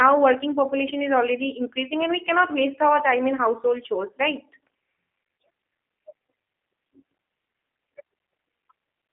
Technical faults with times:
0.00-9.12 G.729 codec

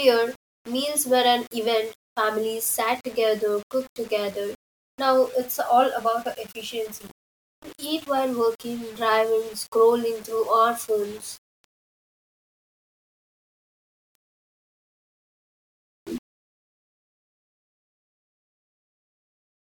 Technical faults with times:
0.00-19.79 low bit depth without dither

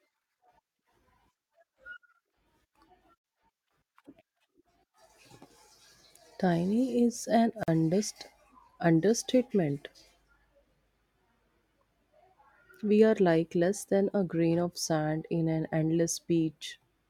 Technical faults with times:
3.18-3.24 gap at a join of encoded pieces
7.63-7.68 gap at a join of encoded pieces

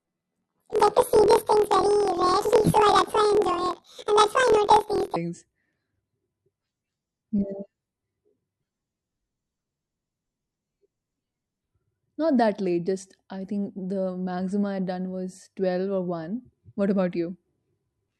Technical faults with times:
0.00-5.18 planar audio read as interleaved

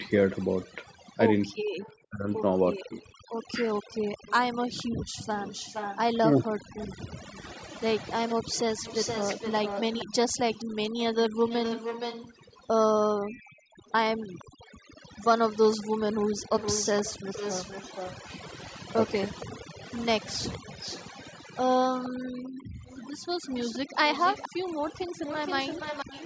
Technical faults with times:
0.00-26.26 overdone noise removal
0.05-26.26 echo leak
2.10-2.92 speech suppressed in double talk
3.20-3.28 background gated by the echo canceller
6.49-6.60 speech suppressed in double talk
13.53-14.64 background gated by the echo canceller
22.60-22.68 speech suppressed in double talk

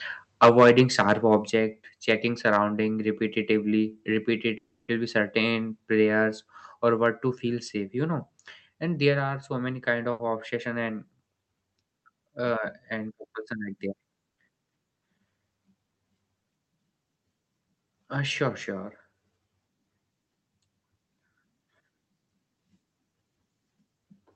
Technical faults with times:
0.42-1.35 microphone overload
0.49 microphone volume stepped down
1.50 microphone volume stepped down
2.47-2.57 microphone overload
4.57-4.90 call audio freeze
10.11-10.21 burst of packet loss
14.31-14.38 short stall from a late packet

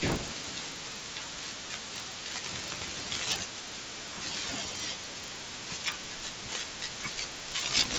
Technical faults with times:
0.00-7.99 resampler restarted on every block

